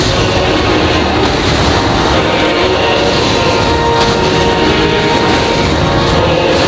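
Gain pumping runs through the whole clip: the gain ducks under each loud sound, a swing of around 5 dB, leaving the dynamics squashed. The likely cause is input gain set far too high, with a fast limiter or compressor clamping down on each peak. On a waveform the envelope looks flattened, with the noise floor rising between bursts, and a spectrogram, empty above 8 kHz from the call processing, shows the background banding lighter and darker in step.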